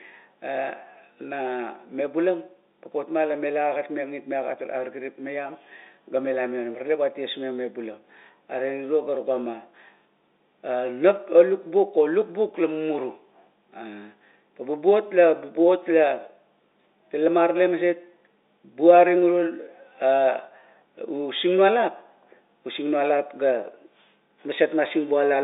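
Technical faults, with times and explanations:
No technical faults can be heard in this speech. The G.711 telephone coding works as intended, with the sound held to the line band of about 300 Hz to 3.7 kHz and nothing above 3.8 kHz, as a 64 kbps mu-law line would carry it.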